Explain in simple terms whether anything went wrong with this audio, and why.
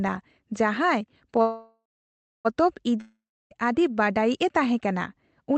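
Two things go wrong in this speech recording, both network problems on a call.

The first is a call audio freeze from 1.41 to 2.47 s. The sound stalls for about a second. The last sound carries on as a fading buzz, then goes silent for about 0.6 s. The likely cause is that data packets got held up, so the playback buffer ran dry. Nothing is lost. The speech simply resumes where it stopped, about a second later than planned.

The second is a long network dropout from 3.01 to 3.53 s. Again the last sound lingers as a fading buzz, then there is about 0.3 s of silence. This time about half a second of speech is gone for good, likely because that audio never arrived. The speech picks up again at "ᱟᱹᱰᱤ ᱵᱟᱰᱟᱭᱤᱡᱼᱮ ᱛᱟᱦᱮᱸᱠᱟᱱᱟ", with the missing part skipped. Throughout, the call's codec keeps the sound limited to about 8 kHz.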